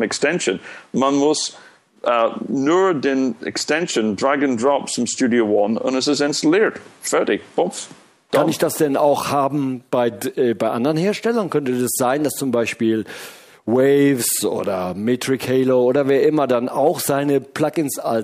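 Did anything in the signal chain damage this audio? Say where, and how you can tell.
No, nothing in the signal chain damaged this audio.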